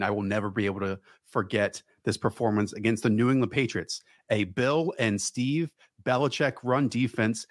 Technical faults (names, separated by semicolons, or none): none